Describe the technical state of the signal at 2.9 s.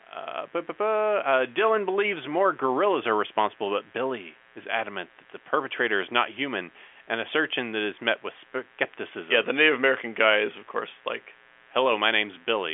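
At 2.9 s the speech carries mains buzz, present throughout the clip: switching spikes twice in every 60 Hz mains cycle make a raspy, harmonic-rich rasp roughly 35 dB below the speech, unlike a smooth low hum.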